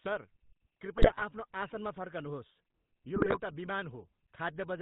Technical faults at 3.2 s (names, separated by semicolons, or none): GSM full-rate codec; GSM bit errors